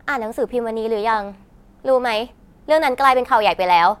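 Nothing here sounds amiss at any point in the speech, so there's no technical fault to point to.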